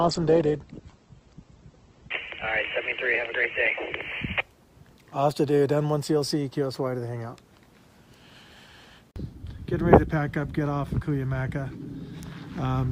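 For the first 4 s it's an adaptive stream starting at a low bitrate: nothing above 8.4 kHz and stronger codec artefacts, fitting roughly 12 kbit/s, then it cleanly steps up.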